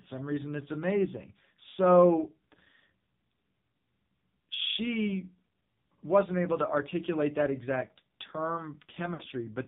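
AMR narrowband mobile codec damage runs through the whole clip. The speech is squeezed into an 8 kHz-sampled channel, so nothing above 4 kHz survives, and the heavy buzzy, synthetic texture suggests a very low bitrate, near 5.9 kbps. At that rate the vocal-tract model has too few pulses to rebuild the voice naturally.

Lost AMR speech frames occur from 9.14 to 9.23 s. Failed radio frames forced the decoder to stretch the last good pitch and vocal-tract settings with falling gain. The result is a drawn-out, fading warble, with about 60 ms of speech missing, which fits three lost 20 ms frames.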